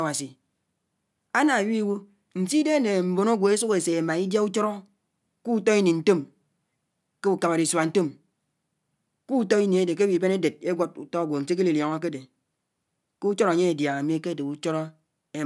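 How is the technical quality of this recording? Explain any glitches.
Listening to this speech recording, nothing stood out as a technical problem, so there are no glitches to explain.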